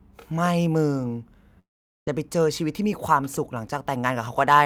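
At 1.59 s the speech breaks off into a short buzzy continuation of the last sound that quickly fades, leaving near-silence for about 0.43 s before the speech resumes at 2.09 s. Nothing of what was said in that gap returns; about 0.48 s of speech is simply gone. This is likely a long network dropout: audio stopped arriving, the receiver briefly extended the final sound to cover the hole, then fell silent until packets flowed again.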